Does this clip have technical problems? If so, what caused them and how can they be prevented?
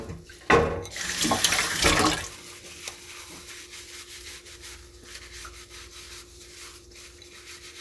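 No, nothing stood out as a technical problem on listening to this recording of sounds, so there is nothing here that needs preventing.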